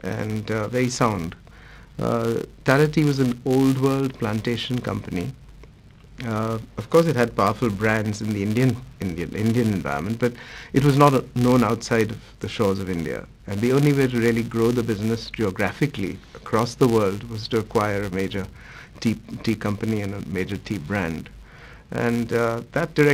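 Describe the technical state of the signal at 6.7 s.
At 6.7 s the signal carries the filter-restarted-on-every-block fault, which runs through the whole clip rather than appearing only at this moment. The filter loses its state at each block boundary and restarts from silence, so every block opens with a small transient. These repeat at 200 Hz, every 5 ms, and are heard as a buzz that rises and falls with the level of the sound. On a spectrogram this appears as a comb of energy at 200 Hz and its multiples. A zoomed waveform shows a small disturbance at the start of each 5 ms block.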